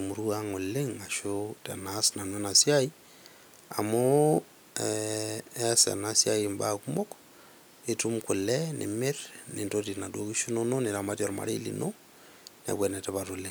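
Nothing goes wrong anywhere in this bit of speech, so there's no technical fault to point to at any moment.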